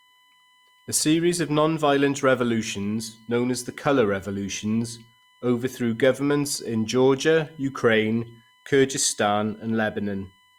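A faint fixed-pitch whine sits under the speech throughout, built on 1 kHz and strongest at 3 kHz. It is USB whine from the bus's 1 ms frames leaking into the audio.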